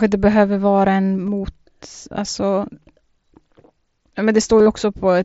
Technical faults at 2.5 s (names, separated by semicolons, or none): none